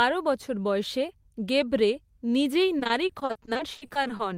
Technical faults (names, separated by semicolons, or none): repeated packet loss (robotic sound)